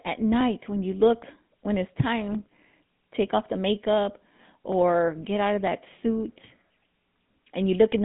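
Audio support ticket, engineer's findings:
Buzzy, gravelly roughness on speech, throughout; GSM full-rate codec, consistent with 13 kbit/s. Nothing above 3.8 kHz. Unlike plain band-limiting, pulse-driven excitation adds grit, not just dullness.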